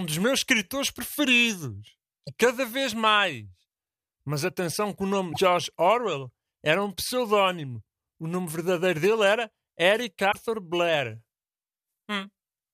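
At 2.26 s, 5.32 s and 10.31 s the speech breaks up for about 30 ms, 56 ms and 40 ms, each time skipping forward. The likely cause is a broken MP3 bit reservoir. After frames were dropped, the following frames reached back into the reservoir for their data and decoded bytes belonging to a different frame. Each disturbance spans roughly one to two 26.1 ms frames before decoding recovers.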